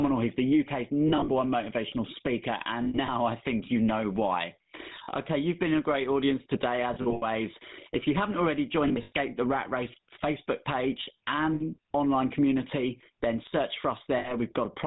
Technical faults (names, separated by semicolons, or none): gain pumping; GSM full-rate codec; lost GSM frames